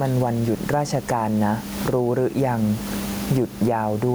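Speech runs through the whole clip with gain pumping: the room noise sits about 29 dB below the speech, and the level swings by around 15 dB. The likely cause is input gain set far too high, with a fast limiter or compressor clamping it on each peak. Unlike a noise gate, this does not cut the background out, and the speech sounds squashed.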